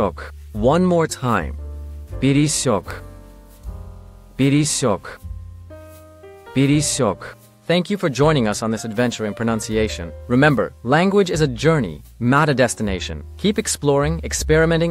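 A loud pop sits at 2.91 to 2.93 s in the audio, a single sharp burst rising about 5 dB above the surrounding sound, which carries on underneath without a break. The likely cause is a sudden voltage step or pulse entering the signal chain, from a plug being seated, a switch being thrown, a static discharge or a glitch in the driver. The circuitry downstream shapes that pulse into the short pop heard here.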